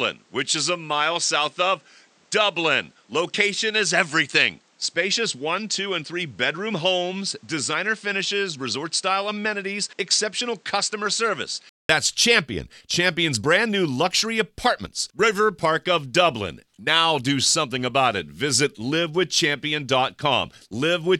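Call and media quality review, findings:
0.00–11.89 s: dull, narrowed sound, nothing above 9.2 kHz, a few dB quieter, with a noise floor only some 35 dB below the signal. 0.2 s silence at 11.89 s, then full band returns. Likely input switched to a poorer device, reverting to the primary microphone.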